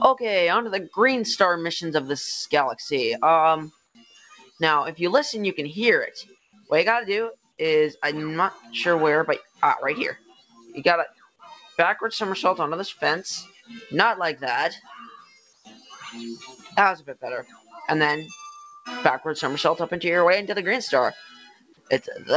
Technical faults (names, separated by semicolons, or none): noise suppressor applied to music or sounds; sound cut by the noise suppressor; comfort noise in place of the background